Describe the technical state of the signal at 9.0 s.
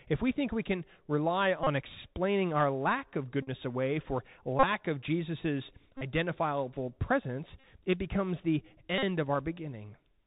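At 9.0 s, a Bluetooth headset packet repeat runs from 8.98 to 9.04 s, just after "presence it becomes the". Lost packets are filled by replaying the last one every 3.75 ms, giving a steady buzz near 267 Hz. The Bluetooth CVSD headset codec is audible here as well. Its one-bit, step-adaptive coding cuts everything above 4 kHz, roughens sharp high sounds, and leaves a granular hiss.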